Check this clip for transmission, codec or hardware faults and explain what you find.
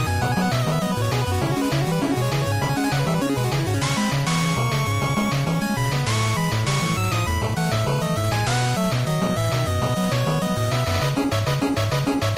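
No transmission, codec or hardware problems can be heard anywhere in the clip; the signal stays steady and continuous throughout.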